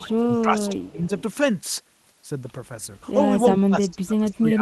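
From 0 to 0.26 s and again from 0.42 to 1.11 s the speech dips by up to about 15 dB and thins, most likely speech suppressed in double talk. The canceller, faced with both sides at once, ducks the near talker too. In and around this stretch, at 0.33–0.41 s, 0.66–0.88 s and 1.18–1.22 s, a faint delayed copy of the voice trails 288 ms behind, likely an echo leak from a loudspeaker. Unlike the suppression, which removes sound, it adds a second, quieter voice. From 3.51 s to the end the speech falls much further, as much as about 30 dB.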